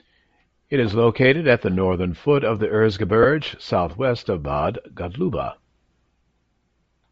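It's a speech clip, and the whole thing has a breathy, grainy edge with the top end sounding thin and hissy instead of crisp. That's plainly audible, and it's likely Bluetooth LC3 compression at a low rate: the encoder drops much of the upper spectrum and papers over it with filler noise. The amount of damage fits something like 32 kbps with 7.5 ms frames. Then there are lost LE Audio frames between about 3.23 and 3.26 s, right after "northern foot of the" and before "southwest of". For roughly 15 ms the decoder repeats the last spectrum with scrambled phase, so you get a short noisy smear in place of clean speech. That gap fits two dropped 7.5 ms frames, which is too short for the concealment to fade out before the signal returns.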